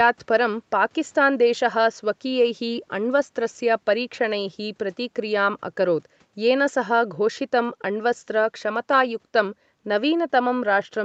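Nothing faulty here: the speech tops out at 8 kHz and the lowest bass is trimmed, as expected from the call microphone processing and the Opus WebRTC call path, both working as intended.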